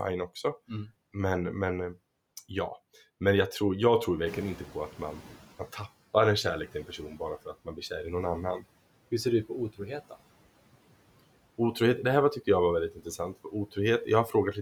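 From 0.37 s to 14.47 s, clock slip clicks run through the speech. Two devices were likely running on unsynchronised clocks, off by roughly 40 ppm, so a single sample is dropped or repeated about every half second. Around thirty faint, regular ticks result, clearest on louder speech.

At 4.26 s the noise suppressor is caught out when the room noise rises by about 12 dB around 4.5 s. Its noise estimate lags, so the louder background comes through under-reduced at first. Over 1.62 s, until 5.88 s, the suppressor catches up and the noise sinks by about 12 dB.

Between 12.92 s and 13.19 s, the noise suppressor cuts speech, mistaking quiet parts of it for background. For about a tenth of a second in total, those quieter sounds are turned down by as much as about 12 dB, so they come across swallowed and faint.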